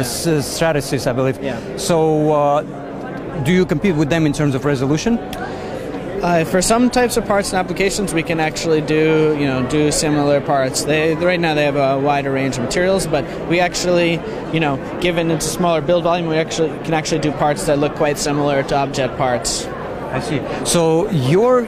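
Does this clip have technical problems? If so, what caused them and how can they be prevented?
No, the signal shows no technical problems.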